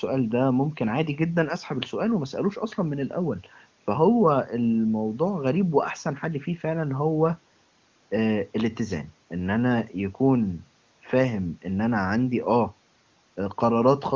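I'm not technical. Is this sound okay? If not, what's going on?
Yes, nothing wrong can be heard in this recording.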